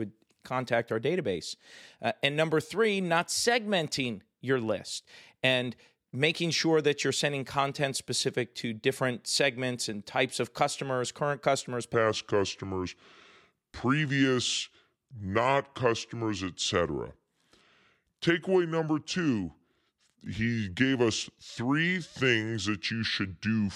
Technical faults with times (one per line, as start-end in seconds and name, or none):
11.94-23.75 section at the wrong speed